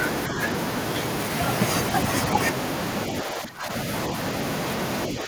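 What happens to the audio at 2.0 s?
Nothing goes wrong at 2.0 s; the speech carries on intact through that moment, with no dropout, click or other fault.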